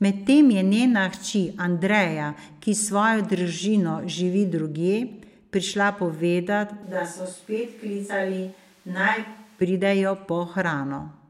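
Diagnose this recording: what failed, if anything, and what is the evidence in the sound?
Speech turns roomy and about 5 dB quieter from 6.83 to 9.61 s, with raised room noise. Likely cause: switch to a distant microphone at capture.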